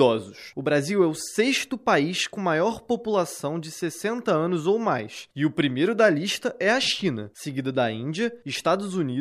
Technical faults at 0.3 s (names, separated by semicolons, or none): none